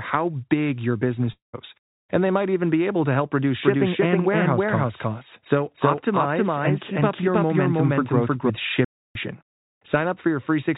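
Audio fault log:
1.32–1.55 s, long network dropout: the sound breaks off, and its last fragment is stretched into a buzzy tail that fades away to silence. When audio returns, roughly 0.22 s of material has been skipped rather than delayed. The likely cause is packets that never arrived, with the receiver's concealment filling the gap until it gave up. Unlike a stall, there is a synthetic fill before the quiet, and the lost stretch never plays.
3.62–8.50 s, doubled audio track: a second copy of the sound runs about 0.3 s behind the first, at roughly the same loudness. This is likely from the same signal being captured twice through paths with different latency, or two out-of-step copies left in an edit. It differs from room echo or reverb because the copy doesn't decay, add room colour or repeat. It covers the same band as the original, up to the 4 kHz limit of the G.711 call path, and it appears and vanishes abruptly at both ends.
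8.85–9.15 s, playback stall: the output cuts to dead silence in mid-flow for about 0.31 s, then picks up again. The likely cause is the player's buffer running dry or its audio thread being blocked, so no samples were delivered until it recovered. Unlike the dropout at 1.32 s, there is no fading concealment tail before the gap.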